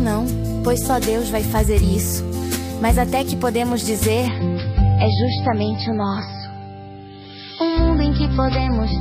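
At 4.28 s the stream drops to a lower bitrate and stays there to the end: the top end cuts off around 5.6 kHz and smearing artefacts appear at once, with no gap. That sudden switch sounds like an adaptive stream stepping from roughly 128 down to 16 kbit/s MP3.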